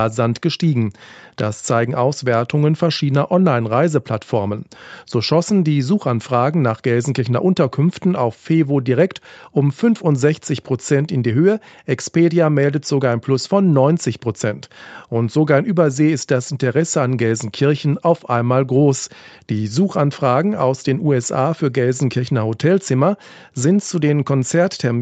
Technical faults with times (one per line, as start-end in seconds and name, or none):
none